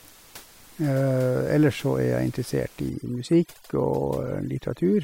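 From 2.90 s to the end, the speech sits over a lowered, twinkling background: overdone noise removal, with bands near the noise estimate cut away.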